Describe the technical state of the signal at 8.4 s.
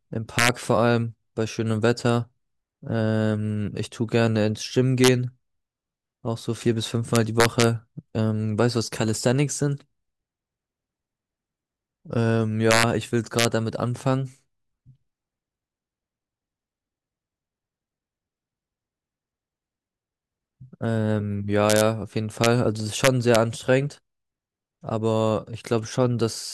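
At 8.4 s the speech signal is intact, with no dropout, clipping, glitch or other fault to be heard.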